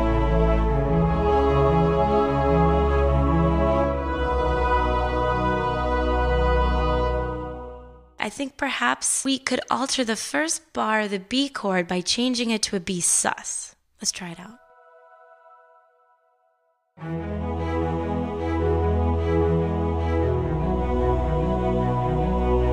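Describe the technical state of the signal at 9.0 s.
At 9.0 s the signal is intact, with no audible fault at that moment.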